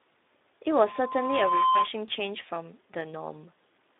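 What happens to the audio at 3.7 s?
At 3.7 s the speech carries the same Speex codec damage heard across the whole clip. Band-limited to about 250 Hz–3.7 kHz, it sounds hoarse and noisy, the CELP excitation starved of bits, which fits a bitrate near 11 kbps.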